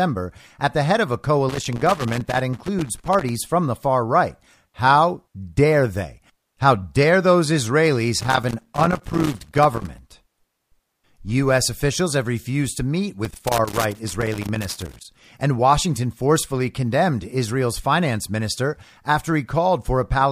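Loose connector crackle hits this speech clip from 1.49 to 3.29 s, 8.20 to 9.99 s and 13.25 to 15.05 s, each burst about 1.8 s long. A worn contact is intermittently breaking the line, chopping the signal into irregular scratchy crackle.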